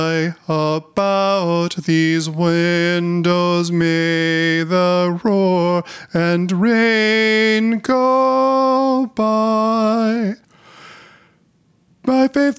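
Throughout, the level ducks by around 10 dB under each loud sound: gain pumping, likely from overly high gain hitting a fast limiter.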